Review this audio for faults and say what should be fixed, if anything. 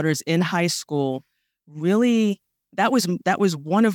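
No faults; nothing to fix.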